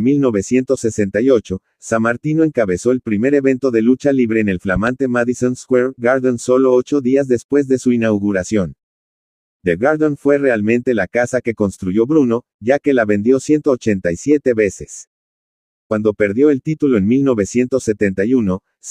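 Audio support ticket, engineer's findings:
Loud pop, 4.76–4.90 s: two sharp clicks a few dB above the program, sound continuing underneath. Likely a voltage spike from a plug, switch or driver glitch.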